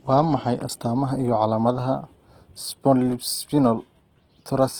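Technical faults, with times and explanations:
Throughout, Opus compression: the speech is plainly grainy and rough, noisy rather than swirly, while the top end stays open to about 20.2 kHz. The likely cause is Opus music (CELT) mode near 16 kbps, filling starved bands with folded or noise-like energy.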